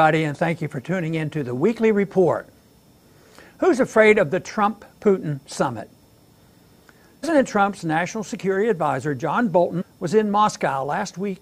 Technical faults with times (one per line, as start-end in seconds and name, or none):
7.22 compressed frames skipped
9.80-9.82 compressed frames skipped